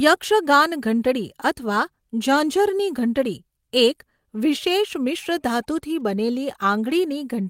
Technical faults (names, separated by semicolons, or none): none